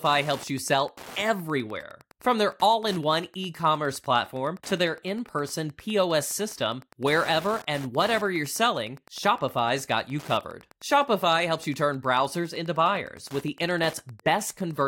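From start to finish, a steady ticking runs under the speech about ten times a second. This is Wi-Fi interference: a nearby Wi-Fi radio's beacon, sent every 102.4 ms, is being rectified by the audio circuit, sitting roughly 25 dB below the speech. Mobile-phone interference comes as a dense buzz of bursts at around 217 per second. Here the individual ticks are distinct and slow enough to count.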